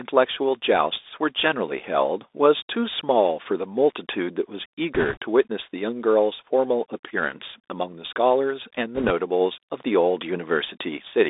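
A speech recording that has clearly gone through a Bluetooth CVSD headset codec the whole way through. The band is squeezed to roughly 300 Hz up to 3.7 kHz, so it sounds thin and phone-like, and the damage is plainly audible: a grainy hiss sits under the talking, s sounds come out scratchy, and louder bright bits smear because the one-bit delta coder's adaptive step can't climb fast enough to follow them. The texture fits a 64 kbps CVSD stream. On top of that there are two short bursts of bit errors on a Bluetooth voice link, from 4.95 to 5.17 s and again from 8.95 to 9.11 s. Each one sounds like a quick rush of crackly noise laid over the speech rather than a hard click. That's because every flipped bit only nudges the decoded waveform up or down by one step, whose size grows with the speech level, and the decoder's tracking pulls back toward the signal afterward, so nothing spikes loudly. 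The amount of roughness suggests an error rate of around a couple of percent during those stretches.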